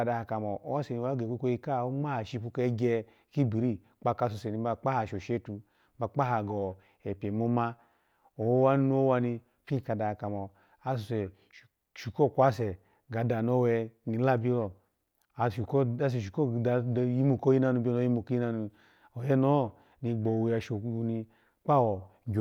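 No technical faults can be heard in the recording.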